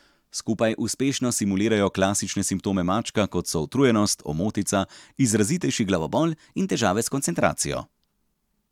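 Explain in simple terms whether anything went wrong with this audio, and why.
Twice, from 0.60 to 1.37 s and 5.95 to 7.43 s, the speech briefly runs about 6% fast and a semitone sharp, then snaps back: likely a drift correction step.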